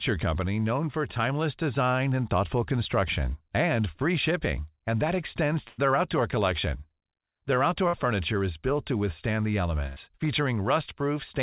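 Three bursts of packet loss break up the speech: at 5.68 to 5.80 s, after "shipping and that extends"; at 7.88 to 7.95 s, just before "furniture is built to"; and at 9.87 to 9.98 s, after "built to withstand the". Each time the receiver stretched the last sound for roughly 98, 52 and 93 ms and faded it, giving a brief held buzz on a voiced sound or a fading hiss otherwise. About 100, 60 and 100 ms of speech is skipped. On a spectrogram each gap shows flat, decaying horizontal streaks before an abrupt restart. The waveform shows repeated, shrinking cycles. All of this sits in a narrowband call path with nothing above 4 kHz.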